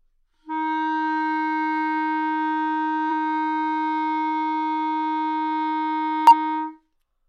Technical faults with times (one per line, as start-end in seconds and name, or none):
3.07 damaged data in a compressed stream
6.27-6.32 damaged data in a compressed stream